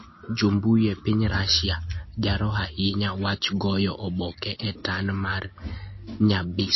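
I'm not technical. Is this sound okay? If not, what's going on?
No. The speech was likely squeezed too hard by MP3 compression, so throughout the clip everything above 5.8 kHz is gone, leaving it dull, watery and swirly.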